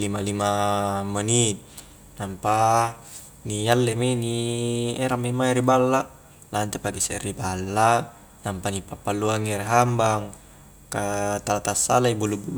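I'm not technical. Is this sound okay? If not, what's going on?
Yes, nothing stood out as a problem when listening to this recording.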